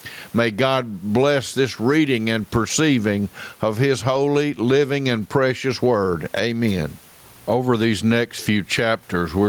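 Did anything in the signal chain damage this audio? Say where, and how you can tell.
Yes. Gain pumping runs through the whole speech clip. The room noise sits about 42 dB below the speech, and the gain swings by around 15 dB. This is likely input gain set far too high, with a fast limiter clamping it back.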